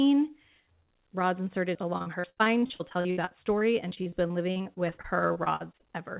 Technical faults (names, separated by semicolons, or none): repeated packet loss (robotic sound)